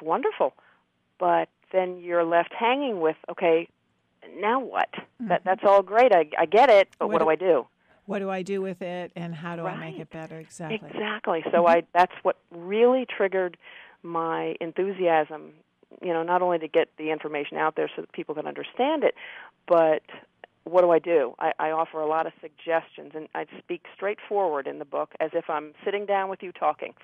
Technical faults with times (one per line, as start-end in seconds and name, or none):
none